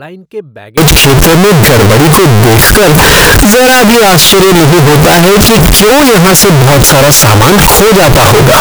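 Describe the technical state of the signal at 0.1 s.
At 0.1 s the speech signal is intact, with no audible fault at that moment.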